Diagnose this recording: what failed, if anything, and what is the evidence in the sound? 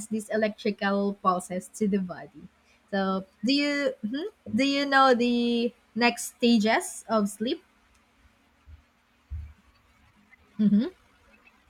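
From 9.96 s to the end, the speech suddenly runs about 1.71 times faster with unchanged pitch, sounding rushed. This is a time-stretched section, likely from software at the processing stage squeezing the audio to fit a length by dropping short pieces.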